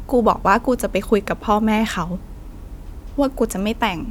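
No technical faults can be heard anywhere in this speech recording. There is nothing in the sound that needs a timestamp or an explanation.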